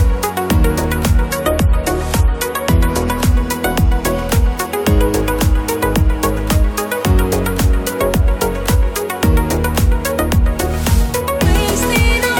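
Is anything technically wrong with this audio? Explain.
Yes. From 1.26 to 3.26 s the treble abruptly thins, with nothing above 14.1 kHz, then returns seamlessly. That is an adaptive stream at a lower bitrate, fitting a step down to 48 kbit/s.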